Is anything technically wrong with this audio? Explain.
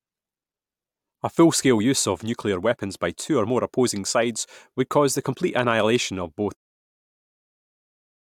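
No, nothing's wrong here: the speech just eases out in a smooth, editor-style fade that starts around 6.5 s and finishes by 6.57 s, with no click or hard edge at the end.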